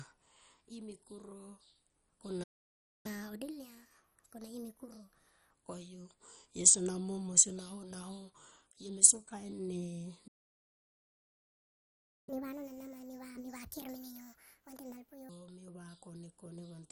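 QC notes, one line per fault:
Throughout: MP2 compression. The sound is dull and has a gurgly, grainy edge where upper sub-bands keep dropping out and the remaining ones are coarsely quantised. It is likely a low-rate Layer II encode, and the plainly audible damage fits something around 48 kbps.
2.43–3.06 s and 10.27–12.29 s: playback stall. The speech cuts out mid-flow and goes silent, first for about 0.61 s and then for a full 2.0 s. This is likely the player starving for data or getting blocked, then picking back up.
3.06–5.51 s and 12.29–15.29 s: catch-up at higher speed. Right after each stall the speech rushes ahead, at 1.25x the first time and 1.5x the second. Pitch rises with it, about four semitones and then around seven, because the backlog is being resampled to win back lost time before it settles to normal.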